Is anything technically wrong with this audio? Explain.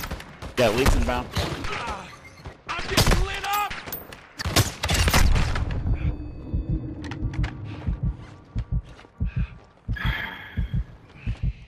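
No, nothing technically wrong can be heard anywhere in this recording.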